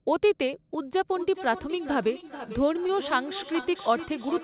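From 1.11 s right to the end there's a feedback echo between two devices. A second device in the room is playing the call back into this microphone, and neither echo canceller catches it. Everything returns roughly every four tenths of a second, peaking at about 12 dB below the speech, thin and ringing.

At 2.21 to 2.24 s and again at 2.87 to 2.90 s you get short concealed packet loss. About 20 ms went missing each time, and the receiver papered over it by extending the last sound before blending back in, so each spot comes across as a brief smear or wobble.

Then at 3.60 to 3.64 s there's a short stall from a late packet. The jitter buffer ran dry, so the receiver held the last sound about 20 ms until the packet turned up and carried on from the same point. Nothing's lost, but that sound hangs a touch too long with a slight buzz or dip, and the narrowband call path keeps everything under 4 kHz.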